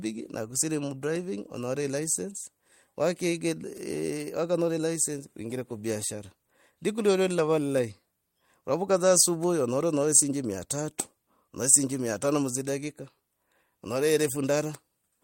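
No technical faults occur anywhere in the recording.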